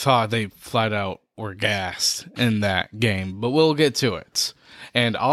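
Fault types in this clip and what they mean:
No faults detected.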